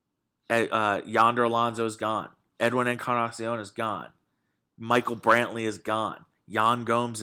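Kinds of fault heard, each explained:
No kinds of fault are heard in this clip.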